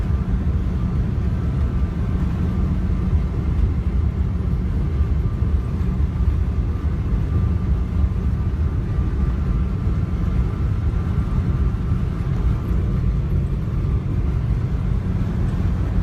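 No technical faults are audible.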